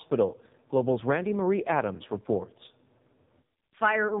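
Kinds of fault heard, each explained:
AMR narrowband mobile codec: The speech has been squeezed through the narrowband mobile phone codec, which samples at 8 kHz and rebuilds the voice from a vocal-tract model excited by a handful of pulses per 5 ms slice. Here nothing survives above 3.8 kHz, so sibilants and airiness vanish, and the coding damage is heavy. The result is a buzzy, synthetic-sounding voice whose coarseness points to one of the lowest bit rates, around 5 kbps.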